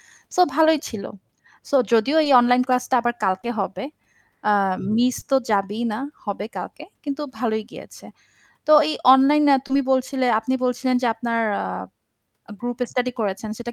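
Short concealed packet loss occurs five times, at 0.63–0.67 s, 2.23–2.27 s, 3.41–3.45 s, 5.19–5.23 s and 9.67–9.71 s. Each time, 20 ms of speech arrived too late to decode, and the receiver filled the gap by extending the preceding sound before blending back in. Each gap is heard as a brief smear or wobble. A spectrogram shows harmonics briefly frozen or blurred, and the waveform shows repeated cycles where the speech was voiced.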